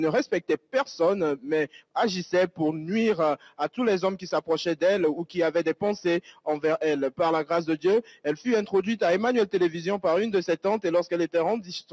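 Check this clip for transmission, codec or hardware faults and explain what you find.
One fault stands out, heard through call microphone processing that leaves nothing above 8 kHz. From 3.38 to 3.59 s, sound is cut by the noise suppressor, which mistakes it for noise and pulls it down by up to about 11 dB for around 150 ms. The waveform envelope dips there, and the spectrogram shows a darkened patch across the band.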